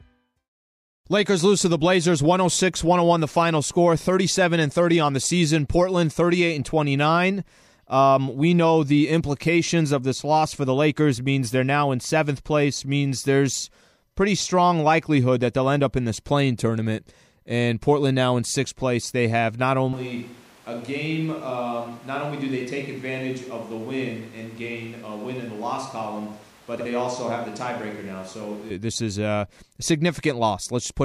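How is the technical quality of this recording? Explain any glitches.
The recording has two noticeable problems in the second half.

From 19.93 to 28.70 s, after "place they have not" and until "this is a", the speech turns hollow, roomy and thin, about 5 dB quieter, with room noise about 25 dB below it. This is a switch to a distant microphone, likely because the close microphone's signal dropped out.

From 26.75 to 26.86 s, a brief garbled flutter comes from frames out of order. Two adjacent runs were swapped, which fits blocks of about 52 ms each, so that stretch plays with its halves exchanged.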